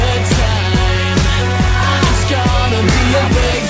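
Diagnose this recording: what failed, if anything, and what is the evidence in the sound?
Nothing in the recording points to a failure at any stage. It passed through a call path whose codec leaves no content above 8 kHz, which fits a wideband call codec working as intended.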